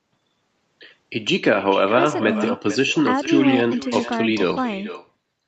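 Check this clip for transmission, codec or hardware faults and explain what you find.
There is one fault, echo with no canceller, present throughout the speech. The far end's loudspeaker output is picked up by its microphone and returned uncancelled, so every phrase is followed roughly 0.4 s later by a copy about 13 dB quieter and thinner. The band stops at 8 kHz, as expected for this call path.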